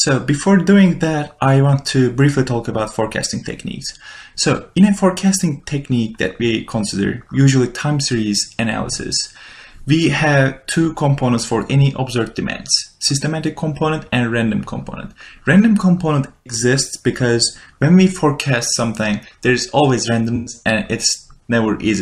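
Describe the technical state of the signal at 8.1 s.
At 8.1 s the signal is intact, with no audible dropout, clipping, distortion or other technical fault.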